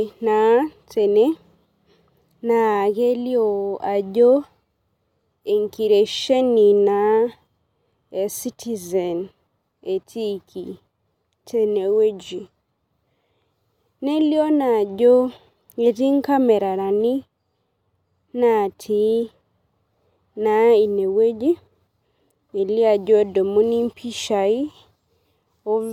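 No technical faults can be heard anywhere in the recording. The speech carries on without any audible break or disturbance to the signal.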